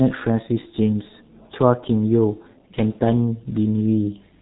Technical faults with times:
0.00-4.42 G.723.1 codec

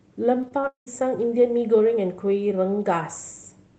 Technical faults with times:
0.41-0.88 repeated packet loss (robotic sound)

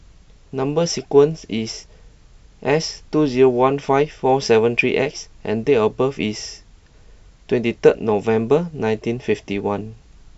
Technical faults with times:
none

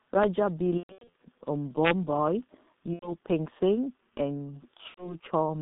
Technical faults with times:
0.00-5.62 G.723.1 codec
0.23 integer overflow
0.77-1.20 VoIP packet loss concealed by the speech codec
2.93-3.17 VoIP packet loss concealed by the speech codec
4.88-5.18 VoIP packet loss concealed by the speech codec

